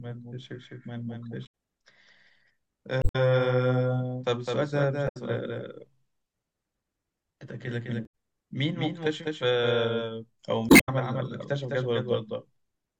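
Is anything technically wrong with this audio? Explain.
Yes, there are two faults. Throughout the clip there is a doubled audio track, most likely from the speech being captured a second time by a slower path and mixed in with the original. A full-band copy about a fifth of a second late and roughly 5 dB quieter runs under the speech, with no reverb or room colour, so every syllable has a dry slapback echo.

There is also damaged data in a compressed stream at 1.43–1.47 s, 2.99–3.16 s, 5.05–5.17 s, 8.03–8.14 s and 10.66–10.89 s. Corrupted frames make the decoder misread the data and lose sync while it searches for the next valid frame header. Each spot produces a short glitch in the speech.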